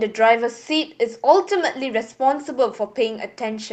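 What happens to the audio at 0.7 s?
Nothing goes wrong at 0.7 s; the speech carries straight through that moment without any dropout, glitch or distortion, with only the ordinary character of the call codec, whose top end stops at around 8 kHz.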